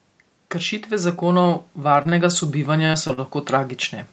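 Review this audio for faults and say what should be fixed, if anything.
Starting at 0.52 s, the speech and the background noise swell together, climbing steadily until about 3.85 s and ending up about 7 dB louder. This is automatic gain rising: the automatic gain control judged the input too quiet and slowly raised its gain across those three-plus seconds. Because it amplifies the whole signal, the room noise grows along with the voice. To prevent it, set a sensible fixed input level, or slow and cap the AGC's upward gain.

From 1.93 to 2.14 s, and again from 2.86 to 3.28 s, the speech turns choppy, with small pieces dropping out. This is repeated packet loss with robotic-sounding concealment. Each stretch has four separate holes. The longest is 30 ms in the first stretch and 40 ms in the second. The receiver patches each hole by extending the preceding sound, which accounts for roughly a third of each stretch, and the next hole arrives before the voice recovers. 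The sound is also band-limited to 8 kHz by the Opus call path. To prevent it, fix the unstable network link or enable forward error correction.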